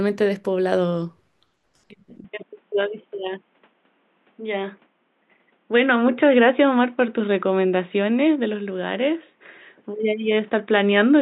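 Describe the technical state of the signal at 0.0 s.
At 0.0 s the speech signal is intact, with no audible fault at that moment.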